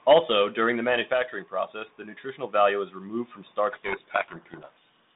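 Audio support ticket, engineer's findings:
Microphone overload, 0.09–0.19 s, just before "during the". Peaks flattened, harsh crackle on loudest syllable, about 7 dB past full scale, roughly a tenth of samples clipped. Likely cause: mic input gain set too high, so the converter hits its ceiling and cuts the waveform tops.

Microphone volume stepped down, 0.13 s (about −3 dB) inside the overload burst, before "during the"; again 1.14 s (about −4 dB), after "during the", before "process the nutritional value". Sudden level drop on voice and background together, no fade. Probable component: call software's gain control reducing device input volume in one step after detecting clipping.

Codec payload misread, 3.72 s to end of clip. Speech buried under harsh, grinding distortion. Mechanism: sender and receiver disagree on bit order of G.726 code words, so the decoder reads each sample's difference bits scrambled and its adaptive predictor tracks wrong values. 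Affects the G.726 path at 32 kbit/s, 150 Hz–3.7 kHz narrowband. Persists until both ends agree on packing.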